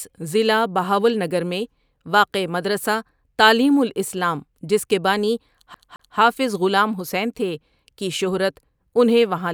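CD stuck on one turn, from 5.74 to 6.18 s in this speech recording: a scratch throws the laser back one track, so the same 0.22 s of audio plays twice, with a brief mute at each jump, giving the quick, even stutter of a skipping disc.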